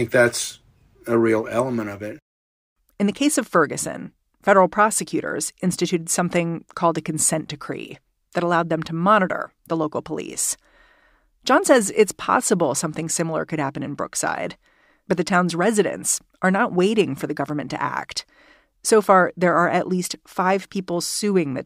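No technical faults can be heard anywhere in this speech recording. There is no moment in it that needs a time marker or any comment on how the signal was handled.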